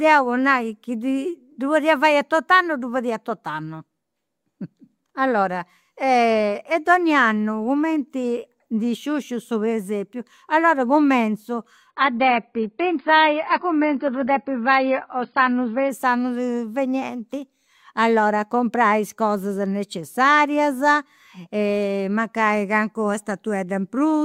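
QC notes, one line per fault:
11.90–15.90 s adaptive stream at a lower bitrate: after "su presepiu allora cumintzu" the speech abruptly loses everything above 5.1 kHz and turns smeared, without any gap, consistent with a switch to a low-bitrate AAC stream.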